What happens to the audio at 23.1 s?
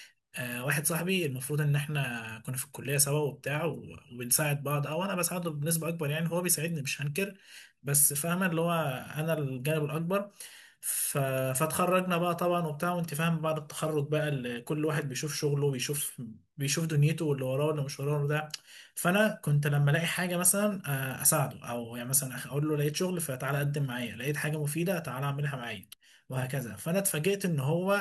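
Nothing goes wrong at 23.1 s; the speech carries on intact through that moment with no dropout, click, distortion or other fault.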